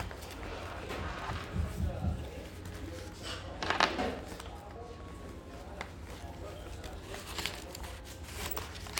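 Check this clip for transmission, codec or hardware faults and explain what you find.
No transmission, codec or hardware faults are audible anywhere in the audio.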